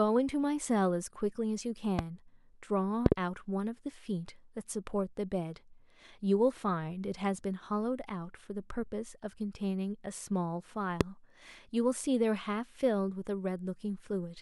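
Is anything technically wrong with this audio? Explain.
Yes. There are loud pops in three places, between 1.99 and 2.01 s, between 3.06 and 3.14 s, and between 11.01 and 11.03 s. The second is a double pop. Each is a sharp burst well above the speech: about 15 dB at 2 s, about 25 dB at 3.1 s and about 20 dB at 11 s. A sudden electrical pulse, likely from a plug, switch or static discharge, was added to the signal. The speech continues underneath.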